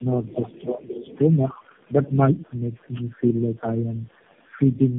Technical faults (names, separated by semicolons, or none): tandem speech coding; echo leak; speech suppressed in double talk